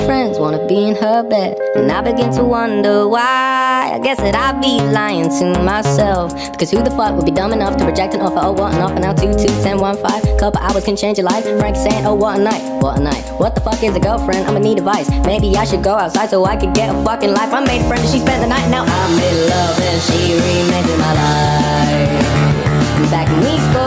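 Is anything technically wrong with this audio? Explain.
Yes. Gain pumping runs through the whole clip. The gain swings by roughly 10 dB. Loud and quiet passages sit closer together than they should, so the sound feels squashed and restless. The likely cause is an input gain set far too high, with a fast limiter or compressor pulling it down on each peak and releasing it in the pauses. The call's microphone processing, with nothing above 8 kHz, is not part of the fault.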